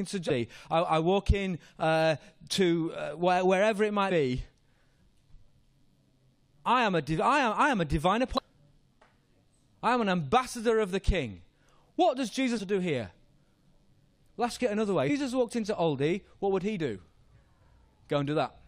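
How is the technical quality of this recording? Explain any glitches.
The speech is marred by five brief glitches of one kind. Damaged data in a compressed stream occurs at 0.29, 4.10 (after "uh where wherever it"), 8.37, 12.57 to 12.59 (before "to do here") and 15.08 s (between "get another way" and "walked into"). Corrupted bytes make the decoder misread frames and resynchronise, producing short chirps or blips.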